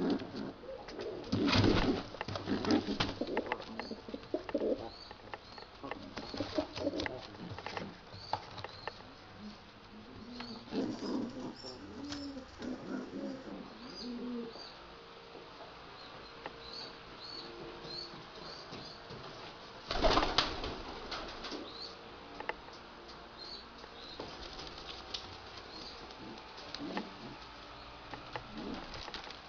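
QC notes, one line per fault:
10.81–13.52 s, section at the wrong speed: this stretch was likely played back against a mismatched clock, running at 1.14 times its recorded rate for roughly 2.7 s before snapping back to normal. Because speed and pitch move together here, the passage sounds hurried and lifted by about two semitones, then drops abruptly to its proper tempo and register at 13.52 s. The jump in pitch on entry and exit marks the two boundaries.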